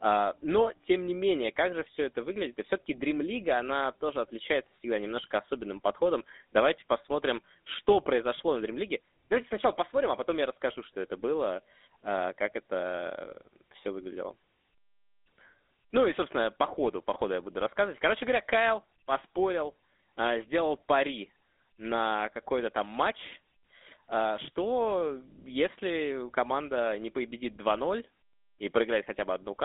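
From start to finish the speech carries the buzzy, gravelly roughness of the GSM full-rate codec. It rebuilds the voice from a vocal-tract model excited by sparse, regularly spaced pulses, which fits a 13 kbps rate and leaves the damage plainly audible. The band runs from 250 Hz to 3.7 kHz. A spectrogram shows a hard ceiling with nothing above 3.8 kHz, empty lows, and smeared, grainy harmonics in between.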